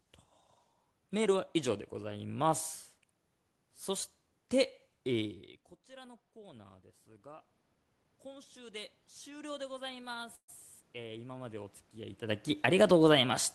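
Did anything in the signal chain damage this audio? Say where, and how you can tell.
Yes, at the call-processing stage. Automatic gain rising shows up twice: from 5.88 to 7.53 s it adds about 4 dB, then from 8.23 to 13.01 s about 6 dB, after the talker drops about 22 dB. Voice and room noise swell together.

There's a call audio freeze at 10.35 to 10.50 s. The sound stretches into a fading buzz or hiss, goes silent for about 60 ms, then picks up with nothing lost, about 127 ms late. That's likely a jitter buffer running dry while packets stalled on the network.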